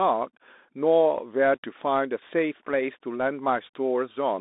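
From start to finish the speech passes through a Bluetooth CVSD headset codec, confining it to about 250 Hz to 3.7 kHz. A spectrogram shows a hard ceiling near 3.8 kHz. The one-bit step coding lags loud high sounds, so s sounds turn scratchy over a granular hiss.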